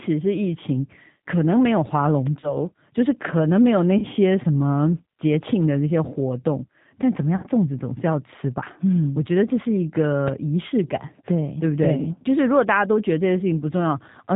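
From the start, the speech has a rough, slightly synthetic edge, and nothing is heard above about 4 kHz. This is G.729 codec damage, and it is plainly audible. The codec rebuilds the voice from a vocal tract filter, a pitch predictor and a handful of pulses in each 10 ms frame, at a rate that points to an 8 kbit/s stream. Fine detail is traded for a coarse approximation.

At 2.40 to 2.58 s, the speech smears into a buzzy tone or coloured noise that fades and then comes back weak and distorted. This is VoIP packet loss concealed by the speech codec, and the gap fits about 30 ms of missing audio. The decoder kept replaying its last pitch and filter at falling gain. Each frame builds on the one before, so the damage lingers past the gap. The same happens at 3.98 to 4.07 s, with about 40 ms lost, and most severely at 7.36 to 7.47 s, with about 70 ms lost.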